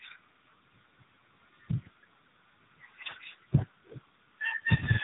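AMR narrowband mobile codec damage runs through the whole clip: the speech is squeezed into a narrowband channel with nothing above 3.8 kHz, and the heavy buzzy, synthetic coloring points to a low mode of around 6.7 kbps, where the vocal-tract model gets few pulses per subframe.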